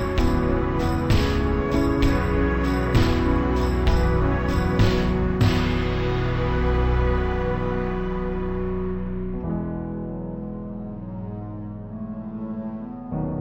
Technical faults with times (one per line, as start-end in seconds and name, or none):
0.00-13.41 stereo read as mono